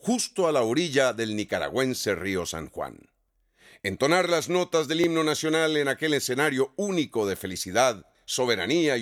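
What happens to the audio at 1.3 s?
Nothing goes wrong at 1.3 s: the audio plays through that moment intact, with no fault to be heard.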